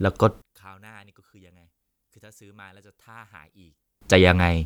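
From 0.42 to 4.01 s the speech drops about 31 dB to a faint residue, likely one channel inverted cancelling in mono; unlike a dropout, it never goes fully silent.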